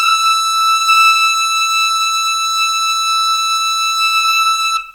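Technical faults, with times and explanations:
Throughout, low bit depth without dither: the music was likely reduced to about 9 bits by simple truncation, with no dither to decorrelate the rounding error. That error therefore tracks the waveform instead of sitting as a steady hiss. At roughly 45 dB below the music, quiet moments and decaying tails turn grainy and gritty, with a distortion whose texture shifts as the sound changes.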